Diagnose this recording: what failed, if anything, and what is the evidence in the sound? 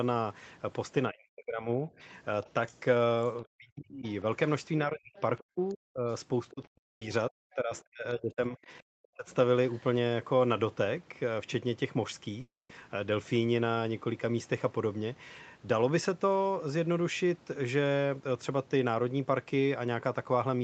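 The speech dips sharply, by about 40 dB at the deepest, and breaks up from 1.1 to 2.01 s and again across 3.44 to 9.27 s, roughly three seconds of it swallowed. This is likely speech suppressed in double talk: the call processing's echo canceller mistook near-end speech for echo while both sides talked.

A faint second voice, about 25 to 30 dB below the talker, surfaces at 2.42 to 2.8 s, 4.05 to 4.14 s, 5.16 to 6.53 s, 7.76 to 7.82 s and 9.71 to 9.83 s. This is likely the other side's voice leaking through, loudspeaker playback the echo canceller failed to fully subtract from the microphone.

A brief smear at 6.65 to 6.69 s is short concealed packet loss at the network stage. About 20 ms of audio never arrived, and the decoder bridged the hole by extending the preceding sound before blending back into the real signal.

At 6.77 to 7.03 s and 12.41 to 12.71 s the sound trails off into a fading continuation, then goes silent for over 0.2 s before resuming. 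This is likely a long network dropout in which concealment ran out and the missing audio was never played.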